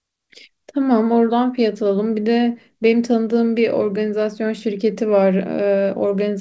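Nothing stood out on listening to this speech recording, which carries the expected 8 kHz top end of a G.722 call path at 64 kbps.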